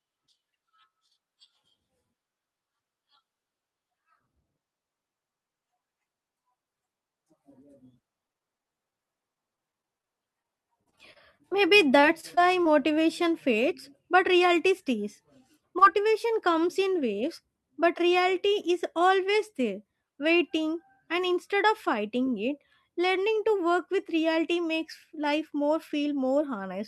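Across three stretches of this speech recording, from 8.27 to 10.46 s, 10.84 to 11.53 s and 12.01 to 12.67 s, the network repeatedly lost or delayed audio packets. This is repeated packet loss, heard as robotic sound. Each dropout lasts up to about 22 to 24 ms, and the receiver covers it by extending the preceding sound before the next gap arrives. The result is a choppy texture with small pieces of the speech missing. Concealed audio makes up roughly a tenth to a sixth of each stretch. A single short concealed packet loss follows at 15.79 to 15.83 s, between "fades but reality stays" and "comes in waves but". About 20 ms of audio failed to reach the decoder in time. The gap was filled by continuing the last sound and then blending back into the real signal, which leaves a brief smear at that point.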